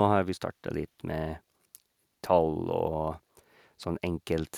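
Speech recording, with no technical fault to report. Nothing in the audio points to a problem anywhere along its path.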